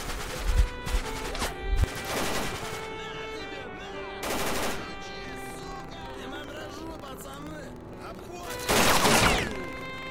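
From 5.21 s to the end at 10.10 s, buffer tearing sets in: the write and read positions in the playback ring buffer have drifted so they cross within every period, so a small slice of each buffer replays audio from about 150 ms earlier. The result is a steady robotic rattle at 23.4 Hz, which fits a 2048-sample buffer. On a waveform, hard discontinuities recur at that spacing; a spectrogram shows regular thin vertical stripes.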